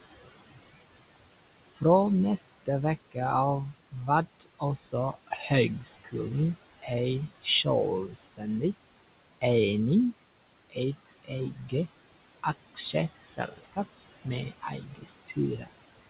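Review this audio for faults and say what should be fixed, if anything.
The background between phrases drops away and then swells back under the talker. These are noise suppressor artifacts: frame by frame, the suppressor pulls down the bands it judges to be steady noise by about 19 dB. Easing the suppression depth and smoothing its gain over time would prevent this.

Quiet sounds and word endings come across swallowed or faint at 1.71–1.82, 3.72–6.14, 6.76–8.43, 10.2–11.73 and 12.43–15.68 s. This is speech cut by the noise suppressor: it mistook parts of the talker for noise and lowered them by about 16 to 20 dB. The longest span loses roughly a second of speech in patches. A less aggressive noise estimate, or better voice detection guarding the suppressor, would keep speech from being treated as noise.

The room noise sits about 15 dB under the speech. Nothing is heard above 4 kHz, which fits a narrowband call codec such as G.711 at 64 kbps.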